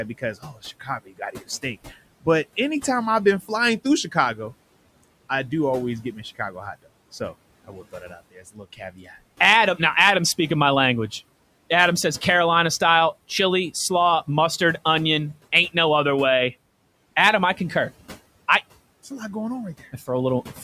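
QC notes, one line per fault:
0.18 to 0.64 s and 1.05 to 1.43 s: speech cut by the noise suppressor. The suppressor mistook brief quiet parts of speech for noise and pulled them down by about 12 dB, so they sound swallowed.
7.67 to 9.1 s: speech cut by the noise suppressor. A longer stretch, around 0.7 s in total, sinks by up to about 16 dB with the room noise, leaving the speech faint.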